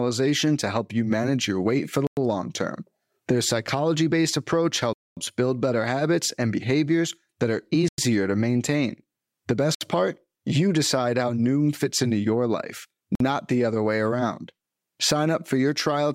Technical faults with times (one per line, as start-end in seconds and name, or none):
2.07-2.17 Bluetooth stall
4.93-5.17 Bluetooth stall
7.88-7.98 Bluetooth stall
9.75-9.81 Bluetooth stall
13.15-13.20 Bluetooth stall